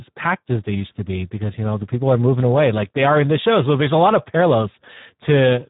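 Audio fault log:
Throughout: Speex codec, heavily squeezed. The speech comes out hoarse and grainy, because at this low rate, around what an 8 kbps setting gives, the CELP coder has very few bits for the excitation. Nothing comes through above about 3.8 kHz, so it sounds narrow and muffled too.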